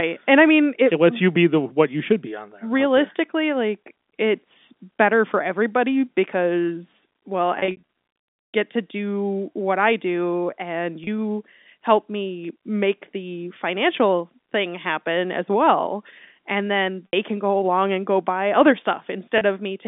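Brief held, buzzy stretches interrupt the sound at 7.59 to 7.83 s after "for everybody because well", 11.04 to 11.07 s after "what I do and", 17.09 to 17.13 s before "can go along and", and 19.38 to 19.41 s. This is packet loss with pitch repetition: the receiver repeated the last pitch period to cover missing audio. About 180 ms was lost over 300 ms at the first point, then 30, 60 and 30 ms.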